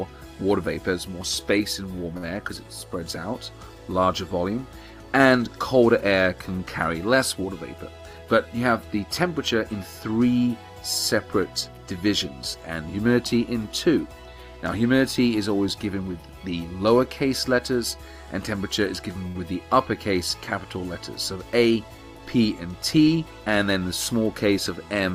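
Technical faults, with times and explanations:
2.17–2.26 s and 19.27–19.38 s, short stall from a late packet: a packet arrived late and the jitter buffer ran dry, so the last sound was stretched for 55 ms and then 78 ms before playback resumed where it left off. Nothing is lost, but a sound lingers with a faint buzz or dip. A spectrogram shows smeared, repeated harmonic bands over that span, and the waveform shows a repeating cycle.
7.97–8.35 s and 21.58–22.20 s, jitter buffer speed-up: the buffer had built up excess audio, so the receiver repeatedly cut out pitch-period-length slices. That removed about 70 ms at 116% speed, then about a tenth of a second at 113%. Pitch holds steady, but the sound rushes. A spectrogram shows time-compressed events with unchanged harmonic spacing.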